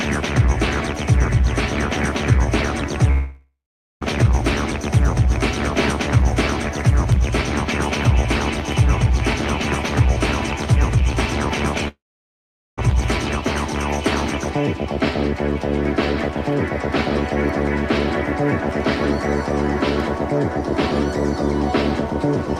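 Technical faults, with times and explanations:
3.11–4.03 s, long network dropout: about 0.9 s lost, likely to a network gap; a fading buzz smears into 0.46 s of silence, seen as a decaying band then blank spectrogram.
11.88–12.79 s, long network dropout: another 0.9 s vanishes; the brief buzz fades quickly, leaving 0.8 s of flat waveform before sound resumes past the missing part.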